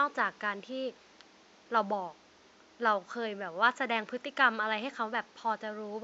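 No technical faults occur anywhere in this speech recording. A faint room noise sits in the background, about 30 dB below the speech, and belongs to the recording itself.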